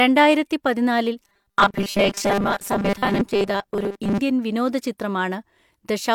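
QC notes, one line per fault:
1.23 to 4.19 s, robotic sound from repeated short buffers: the speech turns into a rigid, metallic 200 Hz buzz. This is likely caused by a 5 ms slice being repeated for most of the span while the real audio was skipped. Unlike a pitch shift, the buzz stays at one fixed rate.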